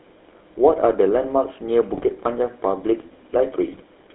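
Throughout the clip the speech has passed through the GSM full-rate codec. It rebuilds the voice from a vocal-tract filter driven by a sparse, regularly spaced pulse excitation, which fits a 13 kbps GSM full-rate stream. Much of the fine detail of the original waveform is thrown away, so the voice has a plainly audible buzzy, gravelly roughness. The line band runs from about 300 Hz to 3.6 kHz, which leaves the sound thin and muffled.

From 1.94 to 2.16 s, and again from 3.73 to 3.82 s, GSM bit errors corrupt the decoder's input, at a bit error rate of 1.67% and then 1.36%. Flipped bits land in the filter, pitch and gain values, and the decoder rebuilds short stretches from those wrong parameters. The spectrum bends and the level jumps for each damaged stretch, so the speech breaks into squawks, pops and a gargling quality in both spots.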